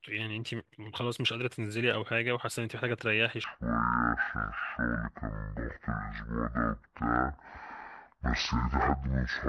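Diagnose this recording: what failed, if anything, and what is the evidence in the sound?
From 3.44 s to the end the speech drops to 0.51x speed, about ten semitones deeper, a section at the wrong speed, likely a playback clock mismatch.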